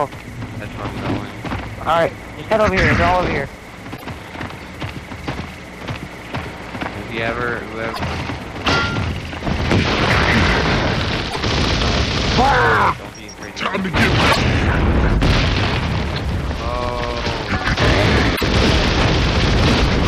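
Damaged data in a compressed stream shows up five times: at 3.93 to 4.03 s, 7.90 to 8.00 s, 11.27 to 11.37 s, 14.28 to 14.37 s and 18.33 to 18.42 s. Each burst lasts about 0.1 s. Some of the compressed bytes were lost or corrupted. The decoder misreads those frames and loses sync, then hunts for the next valid frame header. Each event is heard as a brief chirp, squawk, click or short hole cutting into the sound.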